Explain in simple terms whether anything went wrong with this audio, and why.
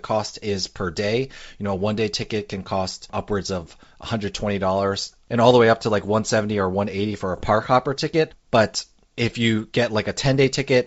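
From 7.34 to 7.50 s, just before "hopper ticket", the speech turns into pops and a rough burst. These are bit errors on an ADPCM link. A small share of bits flipped, and each one knocks the decoder's step size and prediction off, so the roughness lingers briefly.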